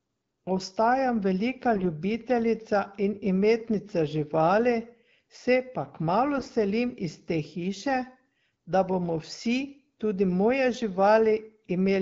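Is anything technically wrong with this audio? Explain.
Yes. At 1.76 to 1.87 s and again at 6.34 to 6.49 s the speech briefly turns hoarse, scratchy and gargly while keeping roughly its pitch and level. These are AMR bit errors: around 5 percent of the less protected bits in the AMR wideband frames arrived flipped. The excitation pulses and the finer pitch, gain and spectral values were decoded wrongly, even though the checksum on the critical bits still passed.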